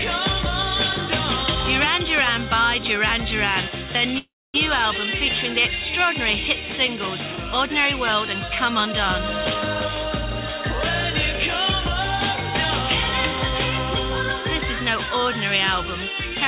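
At about 4.18 s the sound stalls in a call audio freeze that runs to 4.56 s. The most likely cause is packets getting held up in transit so the jitter buffer ran dry. The receiver stretches the last bit of sound into a short fading buzz, then drops to near silence for roughly a quarter of a second before the audio picks up exactly where it left off. Nothing is lost, but everything after it lands about 360 ms later. The band stops at 4 kHz, which fits a G.711-style narrowband call link.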